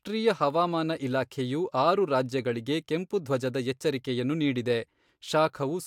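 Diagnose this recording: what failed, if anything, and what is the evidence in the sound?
Nothing in the chain seems to have failed here, and the speech comes across with no audible fault at any stage.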